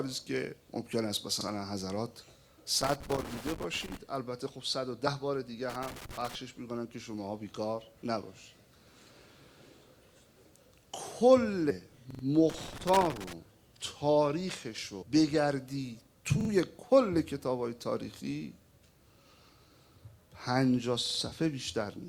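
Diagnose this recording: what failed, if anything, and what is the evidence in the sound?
The driver or buffer stage starved. New audio did not arrive in time, so the device replayed its last buffer, producing a repeated buffer fault. Each repeat is a slice of about 43 ms, which fits a 2048-sample buffer, heard again with a hard join. It plays once more at 1.41 s, three more times at 12.11 s, twice more at 16.41 s and three more times at 21.06 s. The result is a short, machine-regular stutter, with no audio lost between repeats.

In the analogue wiring there is loose connector crackle. A worn or dirty contact is making and breaking as it moves, chopping the signal on and off and adding pops wherever DC sits on the line. This is heard as irregular bursts of scratchy crackle from 2.81 to 3.97 s, 5.70 to 6.35 s and 12.50 to 13.33 s. Unlike the stutters, these bursts have no fixed rhythm, which points to a mechanical contact rather than software.

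At the codec or storage stage, compressed frames were skipped, either missing from the file or rejected by the decoder as damaged. With 26.1 ms frames, the audio jumps forward by about 150 ms (around five frames) at 11.69 s and about 300 ms (around ten frames) at 15.01 s. Because adjacent frames overlap, each join is a brief smeared blip, not a sharp click, and the sound resumes further along.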